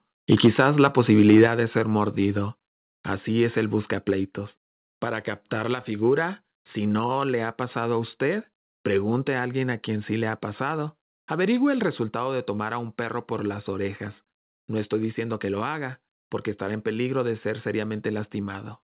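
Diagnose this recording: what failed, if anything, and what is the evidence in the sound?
Between 0.32 and 1.47 s the loudest syllables have a crackling, squared-off edge. That's microphone overload at the converter: the input was likely set about 4 dB too hot, so the tops of roughly 1.5 percent of samples got cut off.

Then the level drops suddenly at 0.47 s (about 2 dB), 1.47 s (about 5 dB), 2.49 s (about 1 dB), 4.11 s and 12.09 s (about 2 dB each). That's the microphone volume stepped down, likely by call processing reacting to the overload, over a narrowband path with nothing above 4 kHz.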